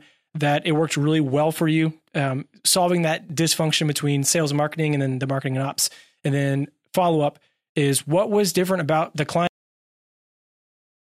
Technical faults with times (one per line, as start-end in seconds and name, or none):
9.47-11.12 cut-off end